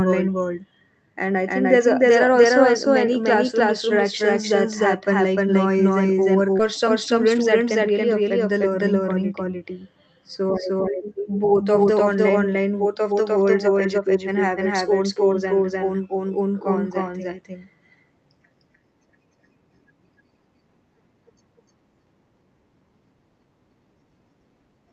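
Speech, and the whole thing carries a doubled audio track: a second full-band copy sits about a third of a second behind the original at roughly the same level, with no decay or room colour. That's most likely the signal being captured twice, with one copy coming through a slower path. At 6.59 to 6.61 s there's a skip ahead, where about a second of speech is simply gone and the two sides are butted together with no gap, as if the jitter buffer dumped audio it had queued. Right after that, from 6.83 to 7.89 s, just before "affect the learning," a jitter buffer speed-up kicks in. The receiver trims short pitch-period slices to shed about a tenth of a second of backlog, so that stretch runs at 107% speed with unchanged pitch and sounds a touch hurried. All of this rides on an Opus call path, which tops out at 8 kHz.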